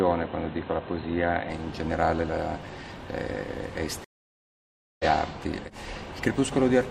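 An input switched to a poorer device is the likely cause of the dull, band-limited sound from 0.0 to 1.5 s. Nothing above 4.1 kHz comes through, and a faint new noise floor sits well below the signal. The level stays steady, and the full band returns with no gap.

A stream reconnect occurs from 4.04 to 5.05 s. The connection drops, leaving about 0.95 s of silence while the player reconnects and starts a fresh decoder. Playback then resumes roughly 0.7 s further on, so that stretch of the sound is skipped.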